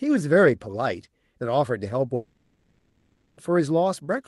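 At 2.15 s the speech breaks off. The last sound is stretched into a fading buzz, then near silence until 3.39 s. About 1.2 s is gone. This is likely a long network dropout, concealed by the call path's Opus decoder.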